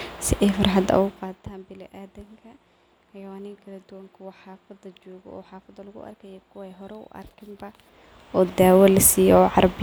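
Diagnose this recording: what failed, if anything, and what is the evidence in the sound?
Nothing failed in this recording, and the sound offers no evidence of a fault at any stage.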